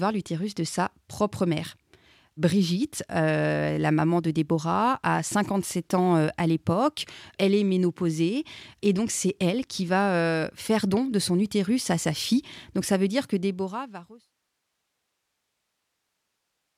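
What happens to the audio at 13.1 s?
The audio is intact at 13.1 s, where the speech is just entering a smooth fade-out that lowers the level gradually, with no click or hard edge.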